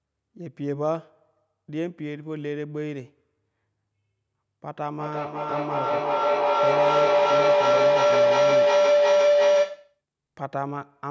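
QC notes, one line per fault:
4.69 to 10.01 s, feedback howl: the microphone-to-loudspeaker loop gained level on every pass, so the repeats grew instead of fading and narrowed to a tone of around 500 Hz. The loop repeats roughly every 400 ms and peaks about 11 dB above the speech, where an ordinary echo would decay.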